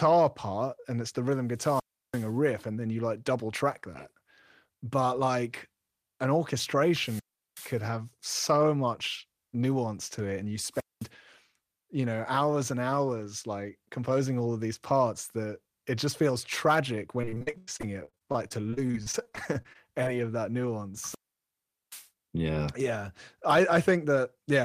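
At 1.48 s, just after "and it's the rhythm", the first wireless microphone squelch dropout occurs. The FM radio link fades, hiss rises briefly, and the receiver's squelch then cuts the output to near silence for about 341 ms before the signal returns at "and then you like" around 2.41 s. The same fault recurs from 6.89 to 7.83 s with a mute of about 377 ms, and from 10.71 to 11.09 s with a shorter mute of about 213 ms.

From 17.21 to 20.08 s, after "it just feels tragic", the speech breaks up with repeated packet loss. Dozens of short gaps arrive in quick succession, the longest about 94 ms. Concealment stretches the last received sound across about 734 ms of the span, roughly a quarter of it, giving a choppy, robotic texture, while another 600 ms is simply missing.

A final squelch dropout starts at 20.97 s, right after "of that". It is the longest, with a mute of about 791 ms before the audio recovers near 22.10 s.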